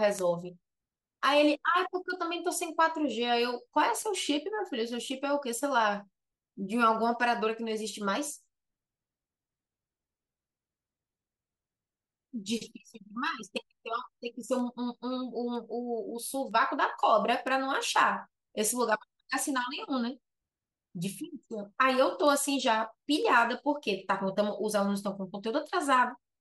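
From 0.19 s to 26.11 s, word clock ticks recur about once a second, roughly thirty in all. The receiver's unlocked clock drifts around 20 ppm from the sender's, so single samples slip. A spectrogram shows thin vertical broadband lines, and the waveform shows one-sample jumps.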